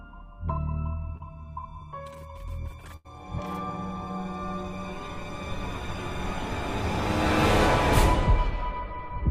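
At 1.17 to 1.24 s there is short concealed packet loss. About 20 ms never arrived, so the receiver extended the last sound, giving a brief smear. From 2.96 to 3.06 s a burst of packet loss follows. An 80 ms gap was filled by a held, fading continuation, and the audio then resumes further on.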